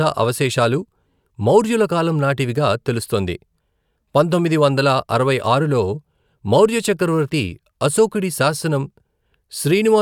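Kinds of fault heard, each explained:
Nothing in this speech recording comes across as a technical fault; it just sounds like ordinary, unbroken audio all the way along.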